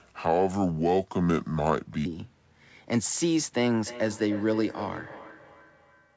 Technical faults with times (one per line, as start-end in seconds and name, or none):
0.00-2.06 section at the wrong speed
3.80-6.16 feedback echo between two devices